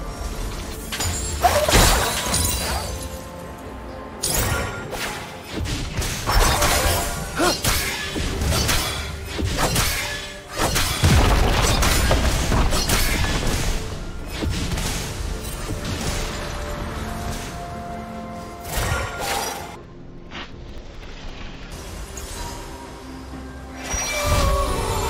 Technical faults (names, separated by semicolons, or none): interleaved audio read as planar